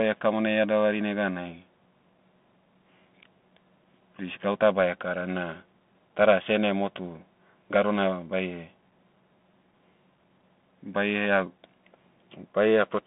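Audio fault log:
Throughout: Bluetooth CVSD headset codec. The speech is squeezed into a telephone band of about 200 Hz to 3.5 kHz, and nothing sounds above 3.7 kHz. The codec tracks the waveform one bit at a time, stepping up or down with an adaptive step. Fast, loud high content outruns that step and smears. The codec damage is plainly audible as gritty, scratchy sibilants and a granular hiss beneath the speech. This fits a 64 kbit/s CVSD link.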